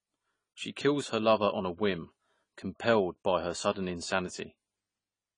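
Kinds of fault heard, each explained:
AAC compression: likely cause of the dull, smeared speech with warbly sibilants; a spectrogram shows nothing above 10 kHz, fitting a low bitrate.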